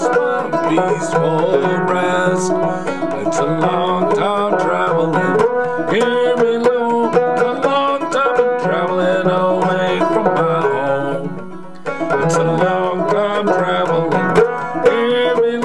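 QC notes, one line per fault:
Throughout, USB whine: a steady tone at 1 kHz sits under the sound for the whole clip, around 45 dB below the signal. It fits current drawn in 1 ms USB frames leaking into the audio through the power or ground path. The pitch is what sets it apart from mains hum, which would sit at 50 or 60 Hz and its harmonics, and from a drifting switching whine, since this tone holds fixed at exactly 1 kHz.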